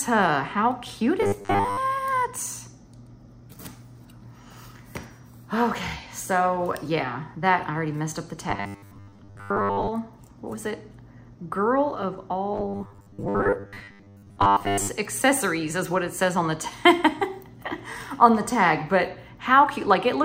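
From 1.22 to 1.78 s, 8.50 to 9.89 s and 12.54 to 14.90 s, the sound turns into a rigid, metallic buzz locked at 100 Hz: robotic sound from repeated short buffers. The likely cause is audio arriving too seldom, with roughly 10 ms chunks replayed to fill the gaps, so most of the real signal is skipped. A longer stutter repeats audible fragments, but these fixed 100 Hz repeats merge into a steady, pitched drone.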